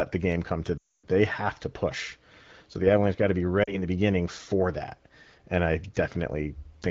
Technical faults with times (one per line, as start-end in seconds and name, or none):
0.78-1.07 lost AMR speech frames
3.64-3.82 lost AMR speech frames